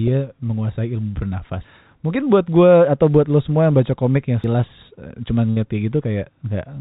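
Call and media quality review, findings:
Abrupt skip at 4.44 s, sound jumping forward with no gap, roughly a fifth of a second gone. Probable component: capture or processing chunking, likely audio missing between chunks, a segment dropped while one block closes and the next opens.

Held, fading fill from 5.50 to 5.58 s, about 61 ms of concealment, then audio resumes with about 60 ms skipped. Burst of packet loss in the call path: the receiver stretched and faded the last sound until packets returned.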